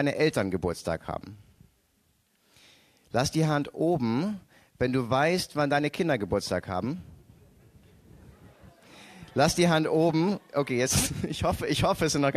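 At 11.06 to 11.08 s, compressed frames are skipped. About 20 ms of audio never plays, so the sound jumps ahead.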